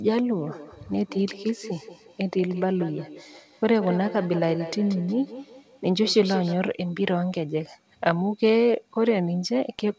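From 0.39 to 6.59 s, two devices in the same room form a feedback echo loop: one plays back the other's microphone signal, which is picked up again beyond either echo canceller's reach. The speech returns about every fifth of a second, thinner and ringing, peaking about 13 dB below the voice, over a band that stops at 8 kHz.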